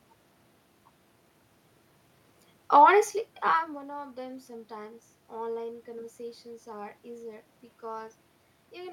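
Speech recording with no system faults: the steady background is room noise picked up by the microphone, and the level shift around 3.5 s is the talker moving relative to the mic.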